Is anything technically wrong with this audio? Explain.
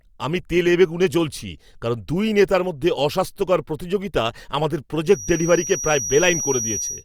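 Yes. From 5.02 s to the end at 7.05 s, just after "মধ্যে অস্বাস্থ্যকর প্রতিযোগিতা আমাদের", a feedback whistle sits behind the speech. It is a thin, steady tone near 5.8 kHz, roughly 10 dB below the speech, and it swells and fades slowly in level. The likely cause is a loudspeaker-to-microphone loop running just at the edge of feedback. One high frequency keeps ringing there, but it never builds into a full howl.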